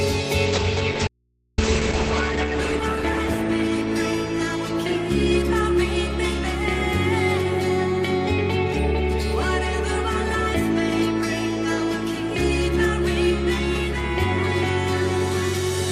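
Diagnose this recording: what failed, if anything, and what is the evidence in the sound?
A call bitrate drop in the codec and network stage runs from 0.47 to 6.17 s. The sound turns rough and muffled. The encoder rate falls from 64 to 10 kbps, bottoming out for about 1.9 s. Audio bandwidth shrinks from 20 kHz to 8 kHz.

An audio dropout to a faint residue cuts in abruptly at 1.08 s and lasts about 503 ms, until 1.58 s. Only mains hum remains, roughly 45 dB below the signal. The likely cause is a lost input upstream while the downstream path stayed live.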